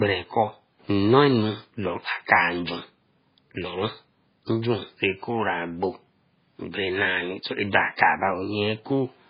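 Throughout the speech sounds watery and swirly, with nothing heard above 5 kHz and a metallic, flickering edge on s sounds. This is likely heavy MP3 compression, fitting a bitrate near 16 kbps, where starved frequency lines drop in and out between frames.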